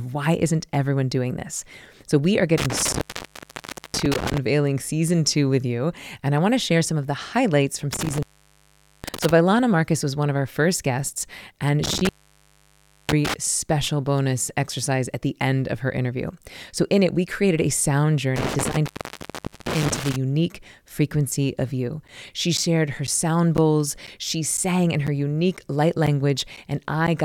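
Speech cuts out four times with crackle at each edge, at 2.58–4.38 s (after "we are", resuming at "season two with you"), 7.93–9.31 s (after "of the highlights from"), 11.84–13.34 s and 18.36–20.16 s, each gap lasting between 0.80 and 1.00 s. That pattern is intermittent contact: a loose cable or plug briefly opening the line. From 22.08 to 27.08 s, just after "frequency of you", regular ticks fall every 0.5 s, about ten of them, each a short silent gap of about 10 ms. These are periodic USB or driver dropouts, where a recurring background task stalls the audio path and a sliver of signal is lost.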